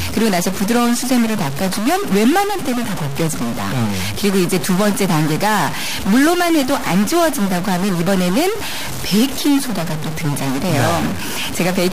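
A likely stuck bit in the converter or data path, a fairly high-order one worth roughly -20 dBFS, corrupts about half the samples of this speech recording from start to finish, adding harsh, buzzy distortion and filling the pauses with a loud noise floor.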